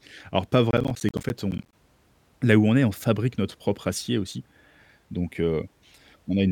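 Processor overload crackle, 0.71 to 1.73 s: about thirty missed buffer deadlines each drop roughly 10 ms to silence, heard as gritty crackle.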